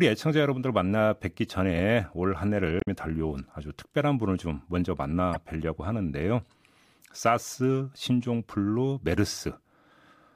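Damaged data in a compressed stream breaks up the speech from 2.78 to 2.88 s and again, more briefly, from 5.34 to 5.36 s. In both spots some bytes of the encoded stream are wrong, so the decoder misreads those frames, loses its place and hunts for the next valid frame header. The result is a short chirp, squawk, click or hole, longer at the first point (about 90 ms) than at the second (about 25 ms).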